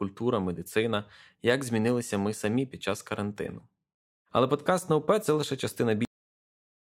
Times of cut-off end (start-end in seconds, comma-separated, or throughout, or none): 6.05-6.91